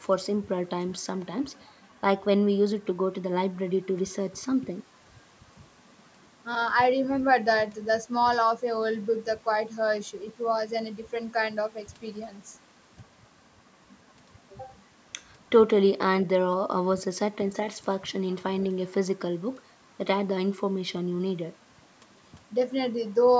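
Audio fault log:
No faults are heard in this speech. The call microphone processing is audible in a top end that stops at 8 kHz and in the trimmed lowest bass, both normal for that path.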